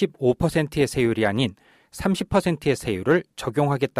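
No technical faults can be heard anywhere in the recording.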